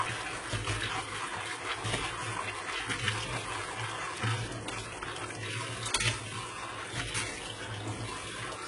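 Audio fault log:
Throughout, HE-AAC compression: the treble is grainy and metallic, with nothing above 11 kHz, and the damage is heavy. The likely cause is a codec that codes only the lower spectrum properly and then fills in the top band by copying lower bands upward under a coarse envelope. Because those copied partials don't line up with the real ones across the crossover, high detail turns gritty and metallic, which points to a very low rate of around 12 kbps.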